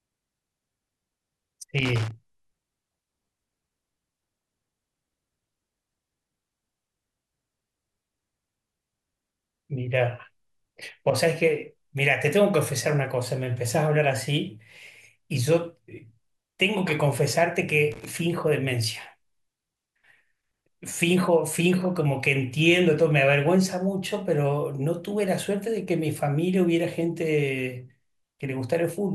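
Speech, with two short bursts of loose connector crackle. The first runs from 1.78 to 2.11 s. The second runs from 17.92 to 18.10 s. Each is an irregular scratching burst that breaks up the sound. A worn or dirty contact in the cable or jack is making and losing contact as it shifts. That chops the signal on and off many times in a fraction of a second. Any DC on the line turns each break into a small pop.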